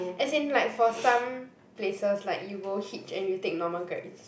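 No technical faults are audible.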